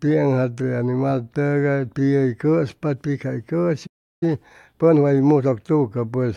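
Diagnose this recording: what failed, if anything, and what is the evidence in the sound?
The playback stage failed first with a playback stall. At 3.86 s the speech stops mid-flow and the output is completely silent until 4.23 s, a gap of about 350 ms, after which the talker resumes where they left off. A waveform shows a flat line with abrupt edges, and a spectrogram shows a clean vertical blank band across every frequency. The likely cause is the player running out of buffered data or its output thread being blocked.

Right after the gap, from 4.23 s to 5.61 s, the player makes up lost time through time-compressed catch-up. The speech runs about 1.25 times faster while keeping its normal pitch, so it sounds hurried. The player is cutting small pieces from its backlog and cross-fading across the joins. On a spectrogram the harmonic spacing stays the same but syllables and pauses are squeezed closer together, and the waveform shows compressed envelopes.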